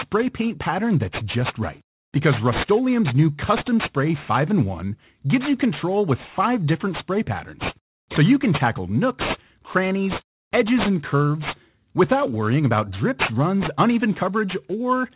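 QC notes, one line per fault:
Throughout: aliasing. The speech looks like it was resampled down without a low-pass filter first, which fits a drop to an 8 kHz rate. Everything that was above 4 kHz has folded back under that line at the wrong pitches, so the sibilants come out gritty and metallic rather than crisp. The folded junk sits around 15 dB below the speech, and the spectrum runs hard right up to the 4 kHz edge.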